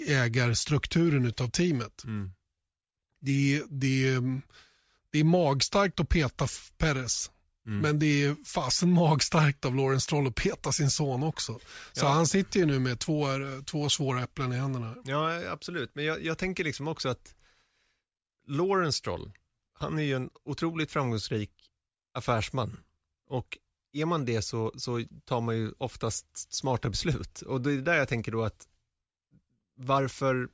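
Nothing in the speech stood out as a technical fault on listening.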